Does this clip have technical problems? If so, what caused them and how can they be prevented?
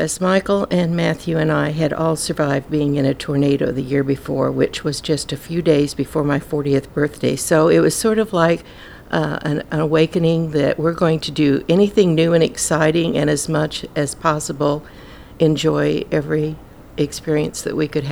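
No technical problems are audible.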